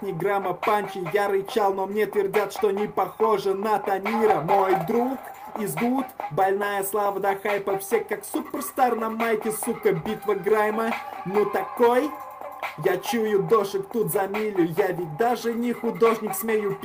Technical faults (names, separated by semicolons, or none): none